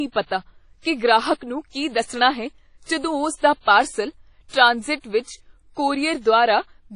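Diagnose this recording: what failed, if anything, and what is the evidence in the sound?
The speech sounds washy and ringing from start to finish, with a hiss that swells and fades along with the signal, and nothing at all is heard above about 10.1 kHz. The damage is plainly audible throughout and sits at the codec stage, most likely WMA compression at a low bitrate, which fits roughly 32 kbps. Long transform blocks smear quantisation noise around each sound, weak spectral lines are discarded, and the top band is cut off to save bits.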